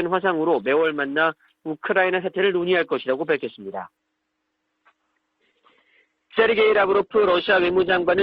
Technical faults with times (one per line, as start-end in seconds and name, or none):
3.97-8.22 adaptive stream at a lower bitrate